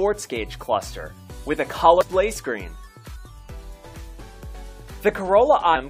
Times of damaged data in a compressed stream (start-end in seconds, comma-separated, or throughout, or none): 2.01-2.03, 3.15, 5.75-5.77